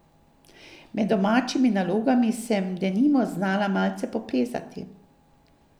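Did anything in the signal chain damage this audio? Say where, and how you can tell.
No, nothing in the signal chain audibly damages this speech recording. No stage, from the wiring and converter through to storage and playback, leaves any mark on the sound.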